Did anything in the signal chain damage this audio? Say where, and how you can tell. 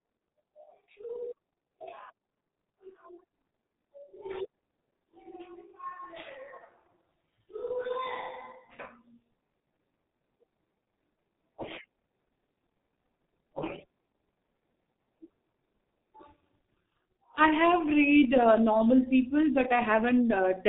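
Yes. The codec stage damaged this speech, with heavy G.723.1 codec damage throughout. Nothing passes above 3.8 kHz, so the speech sounds muffled. Consonants blur and the tone turns hoarse. Coarse 30 ms frames and a slow voice model cause this, which fits a bitrate near 6 kbit/s.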